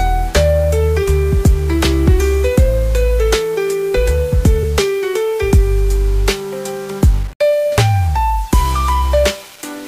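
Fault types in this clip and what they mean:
Low bit depth without dither: Grainy, signal-following distortion runs through the whole clip, with quiet passages turning gritty and the faintest parts sputtering between levels. This sounds like rounding to roughly 6 bits without dither, which likely explains an error floor only about 25 dB below the signal.
Compressed frames skipped: Three brief joins appear where the audio jumps forward, at 1.02, 4.62 and 8.52 s. Each jump matches dropped codec frames of 23.2 ms, about one frame at the first and last, and roughly two frames at 4.62 s.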